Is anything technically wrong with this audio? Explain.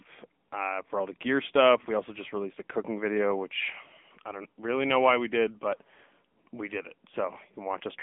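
Yes. The whole recording has passed through an AMR narrowband mobile codec, the AMR-NB speech coder used on 2G and 3G calls. Nothing above about 3.7 kHz survives, and the usable band sits roughly between 250 Hz and 3.5 kHz, giving a thin telephone sound. The codec rebuilds speech from a vocal-tract model excited by sparse pulses, and the damage is plainly audible as a buzzy, synthetic texture. This fits the AMR-NB mode of around 8 kbps.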